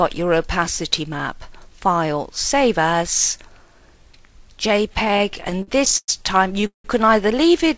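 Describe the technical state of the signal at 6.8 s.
A fading buzz trails into about 120 ms of silence from 6.66 to 6.86 s before the sound resumes intact: a call audio freeze, likely an emptied jitter buffer stretching playback by 177 ms.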